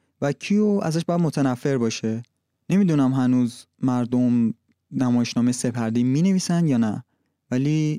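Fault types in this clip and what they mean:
No faults can be heard anywhere in this recording.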